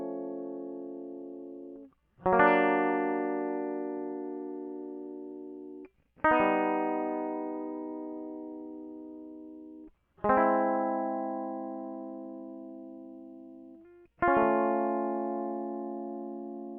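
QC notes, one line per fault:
No faults are heard in this music clip. Nothing here calls for a timed entry.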